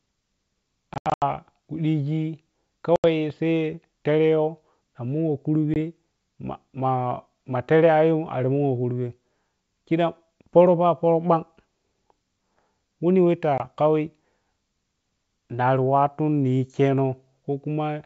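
Packet loss on an ADPCM call cuts silent holes at 0.94–1.22 s (gaps up to 80 ms), 2.96–3.05 s, 5.74–5.77 s and 13.58–13.61 s. Each time, the decoder's predictor falls out of step with the sender's, so the speech returns briefly distorted.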